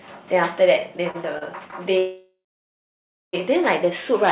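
From 0.8 to 1.74 s the speech hits repeated stalls (stutter): four short jitter-buffer underruns, the longest about 34 ms, are bridged by stretching the last sound. Unlike a freeze, nothing stops outright; the speech just hitches and drags.

From 1.98 to 3.35 s comes a call audio freeze, likely from packets held up in transit. The last sound carries on, fades, then leaves about 0.95 s of silence. Speech resumes exactly where it halted, 1.35 s later, with nothing skipped, unlike a dropout.

Throughout, the narrowband sound with nothing above 4 kHz fits a G.711-style call codec.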